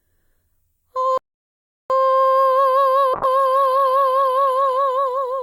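A short piece of music with two problems. The first is a playback stall: at 1.18 s the music cuts out completely, and nothing comes through until 1.90 s, a gap of about 0.72 s. It sounds like the player ran dry, most likely because its buffer emptied or its audio thread got held up, so it had nothing to hand the output until it caught up again. The second fault starts at 3.15 s and runs to the end: a call bitrate drop, where the encoder goes from 128 kbps down to 20 kbps, presumably after the bandwidth estimate fell. It sits at that floor for about 1.7 s. With that few bits, Opus codes everything much more coarsely and trims off the top end, so the music goes muffled and watery, losing the crispness it had earlier.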